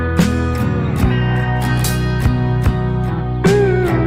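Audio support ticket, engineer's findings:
No fault found in the signal path; nothing to attribute to any component on this ticket.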